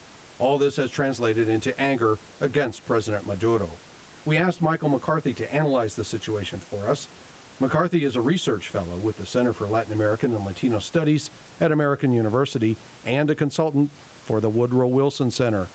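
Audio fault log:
throughout  gain pumping: the gain swings by around 10 dB, so loud and soft passages sit closer together and the sound feels squashed. The likely cause is input gain set far too high, with a fast limiter or compressor pulling it down on every peak.
0.00–11.04 s  channel delay (comb filtering): one channel lags the other by around 10 ms, and when the two are summed to mono their shared content cancels at evenly spaced frequencies, the lowest notch near 40 Hz. The speech sounds hollow and phasey until the colouration stops at 11.04 s.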